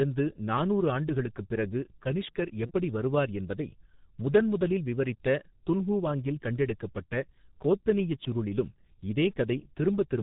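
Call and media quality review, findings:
G.723.1 codec across the whole speech path: low-rate coding, which fits about 6.3 kbit/s, discards everything above 4 kHz and tracks the voice model slowly in 30 ms frames. Heavy damage: muffled, hoarse speech with smeared consonants throughout.

VoIP packet loss concealed by the speech codec, 2.66 to 2.72 s: a gap consistent with one lost 30 ms frame, filled by the decoder extrapolating its last pitch and filter at falling gain. Brief fading smear in place of clean speech.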